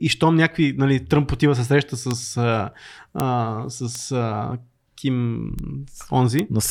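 Five sharp, isolated ticks cut through the speech at 2.11 s (just after "отива се среща"), 3.2 s, 3.95 s, 5.59 s and 6.39 s, peaking at about -8, -2, -8, -14 and -2 dBFS. Each is a bit error spike: a single flipped bit in memory or on a digital link throws one sample (three in a row at 2.11 s) off by a power of two before it snaps back, giving a broadband click unrelated to the voice.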